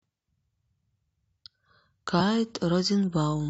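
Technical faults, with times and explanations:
2.20 s, damaged data in a compressed stream: a quick glitch cuts through the speech. A bit of the encoded stream got corrupted, so the decoder misread those bytes, lost its place and had to hunt for the next good frame header to resync.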